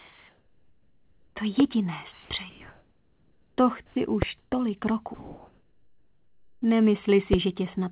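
Comfort noise in place of the background runs from 0 to 1.36 s, 2.12 to 2.30 s, 2.50 to 3.58 s, 4.38 to 4.52 s and 5.14 to 6.62 s. The sender likely stopped transmitting during pauses, and the receiver filled each gap with steady, featureless synthetic hiss. In the second, third and fifth gaps, that hiss sits about 2 to 3 dB below the real background.

A loud pop lands at 1.60 to 1.62 s, 4.22 to 4.25 s and 7.33 to 7.36 s. Each is a single sharp click peaking roughly 15 dB above the surrounding sound, likely from a voltage spike or driver glitch. The sound continues underneath.

Sound dropped by the voice detector occurs at 3.86 to 3.96 s. The detector likely misjudged the audio as background, so about 60 ms of sound gives way to comfort noise before transmission resumes.

Throughout, nothing is heard above 4 kHz, which fits a narrowband telephone codec on the call path.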